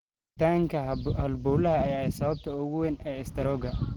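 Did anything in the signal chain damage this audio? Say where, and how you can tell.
Yes, at the codec stage. Throughout the speech sounds muffled, hoarse and grainy, yet content still reaches about 20.1 kHz. That points to Opus compression in its hybrid speech mode, likely at a low rate that fits 16 kbps, starving bands of bits.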